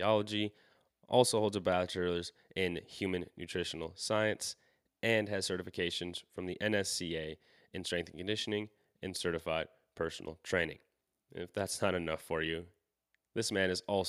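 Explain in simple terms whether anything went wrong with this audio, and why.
Nothing went wrong; no technical faults are audible here.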